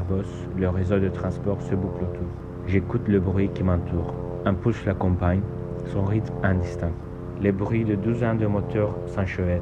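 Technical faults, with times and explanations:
Careful listening turned up nothing that stood out at any point in the audio.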